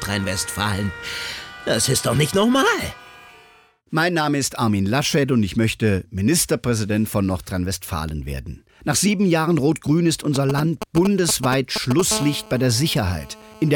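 From 10.36 to 12.01 s there are GSM signalling bursts, a galloping dit-dit-dit of short 217 Hz buzzes, nearly as loud as the sound itself. A nearby 2G phone is sending brief radio bursts that the audio circuit rectifies. Then, from 12.11 to 13.71 s, it settles into a steady GSM phone buzz, a raspy 217 Hz tone full of harmonics at about 14 dB below the signal, as the phone holds a call.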